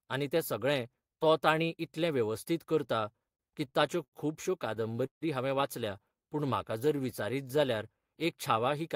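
From 2.87 to 4.15 s the speech hits repeated stalls, a stutter. Packets arrived late, so the jitter buffer kept running dry. There are nine short halts, the longest 88 ms. Each one is filled by carrying on the last sound. Nothing is lost, but about 18% of that stretch is filler. A second burst runs from 4.75 to 5.24 s. It has five stalls, one lasting 155 ms, and filler takes up about 39% of the span.

From 6.22 to 7.57 s comes a jitter buffer slow-down. The buffer needed more reserve. To build it, the receiver repeated single pitch periods and slivers of pauses many times over. This adds 112 ms, so the passage plays at 92% speed. The pitch stays the same. Sounds are drawn out, and a faint warble can creep in.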